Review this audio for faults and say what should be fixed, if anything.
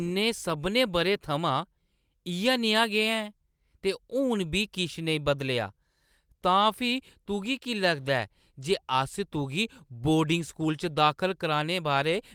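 Nothing here needs fixing; I couldn't hear any technical fault anywhere in the speech.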